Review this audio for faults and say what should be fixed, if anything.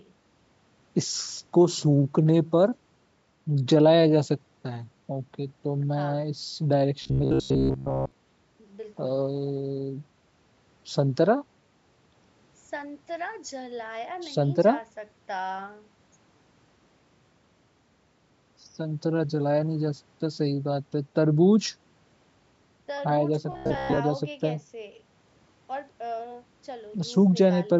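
Robotic sound from repeated short buffers at 7.02–8.12 s and 23.52–23.99 s: a rigid 67 Hz buzz, likely from a 15 ms chunk looped, showing as evenly spaced harmonic stripes and identical waveform cycles. Keeping audio delivery steady, with a larger jitter buffer, would prevent it.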